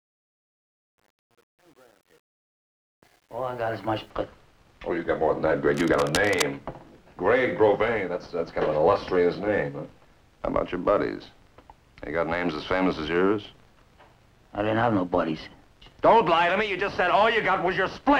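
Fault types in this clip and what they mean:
Truncation distortion on a fade: across the fade-in to 4.1 s, worst until 3.45 s, too few bits (about 9) leave the quiet start gritty and stepped.
Cable scratch noise: from 5.74 to 6.44 s, dense uneven scratching sits about 10 dB below the sound, likely a worn cable or connector being moved.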